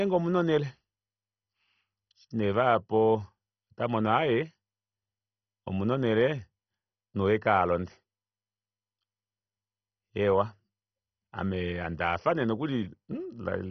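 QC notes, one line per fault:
Throughout, MP2 compression, likely: dull, gurgling granular speech with nothing above about 6.1 kHz, upper sub-bands flickering off, unlike steady lowpass filtering, pointing to roughly 32 kbps.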